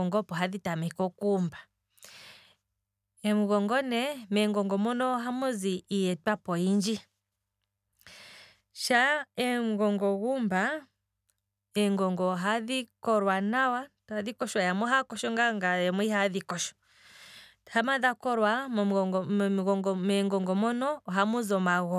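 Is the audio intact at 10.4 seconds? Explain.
Yes, the speech plays through 10.4 seconds intact, with no audible fault at that moment.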